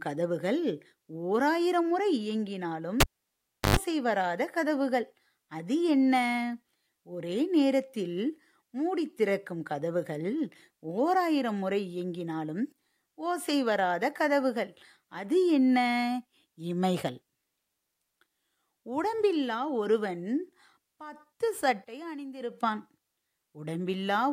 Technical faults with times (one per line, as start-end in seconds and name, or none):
3.00-3.76 cable pulled and plugged in